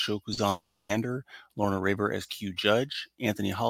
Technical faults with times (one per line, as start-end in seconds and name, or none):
0.33-0.39 short concealed packet loss
0.49-0.91 long network dropout